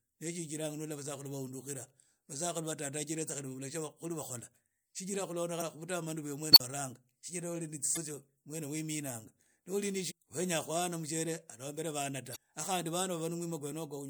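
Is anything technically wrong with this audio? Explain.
Yes. The speech has two kinds of fault.

Damaged data in a compressed stream hits four times: 5.58 to 5.62 s, 7.93 to 7.98 s, 10.10 to 10.12 s, and 12.32 to 12.37 s. Corrupted bytes make the decoder misread frames and hunt for sync. Each event is a brief chirp or blip.

An unstable filter fault occurs from 6.52 to 6.60 s. A recursive filter with bad coefficients runs away. A tone around 4 kHz swells over about 38 ms into a loud squeal. The output then overflows and drops to 40 ms of silence.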